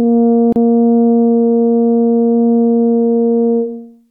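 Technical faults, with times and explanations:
0.53–0.56 s, gap at a join of encoded pieces: the music drops out for about 34 ms, with edges smeared by the codec, then resumes exactly where it stopped. This points to two separately encoded segments being spliced without trimming, so the first segment's padded final frame and the second segment's encoder start-up delay both remain as silence in the middle of what should be continuous playback.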